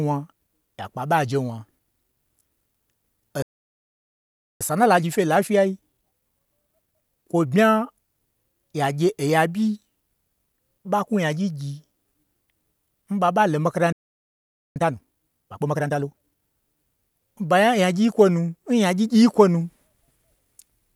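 At 3.42 s the speech cuts out mid-flow for about 1.18 s, a playback stall that likely came from the player running dry or its thread being blocked. The waveform drops to a flat line and the spectrogram shows a clean vertical blank across all frequencies. From 4.61 to 7.61 s a time-compressed catch-up follows. The speech runs about 1.15 times faster at unchanged pitch, as small slices are cut and cross-faded. On the spectrogram, harmonics stay at the same height while syllables crowd closer together. A second stall, likely from the same starvation or blocking, silences the audio from 13.92 to 14.76 s, about 0.83 s, and again leaves a flat, empty gap. The catch-up from 14.76 to 16.42 s is harsher at 1.5 times speed. The speech sounds clearly rushed. Syllables are tightly packed on the spectrogram.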